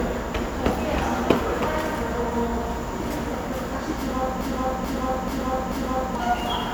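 From 4.41 s to 6.15 s the sound stops moving forward and a single fragment about 435 ms long plays four times, back to back, identical each time, like a stuck broken-record loop. The repeats are exact and butt against each other, and whatever should have followed in that stretch never arrives. The likely cause is a stall in the player, encoder or stream, which kept resending the last piece it held.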